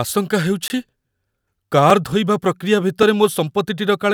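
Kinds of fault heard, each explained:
Block of digital silence: runs of samples were zeroed with no fade, cutting a 20 ms hole near 0.68 s and brief ticks at 1.90 and 3.03 s.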